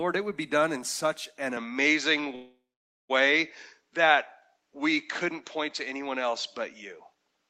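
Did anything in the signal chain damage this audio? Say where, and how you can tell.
Yes. Right after "done in such an", at 1.57 s, the sound turns duller, about 5 dB different in level, with nothing above 7.6 kHz and a new noise floor about 55 dB down. On a spectrogram, the top band ends abruptly. At the capture stage, this is likely an input switched to a poorer device.

A call audio freeze from 2.35 to 3.11 s inserts 0.74 s of fill without losing any audio. The waveform shows a fading buzz or hiss, then 0.5 s of flat silence. The likely cause is packets held up on the network, which drained the jitter buffer.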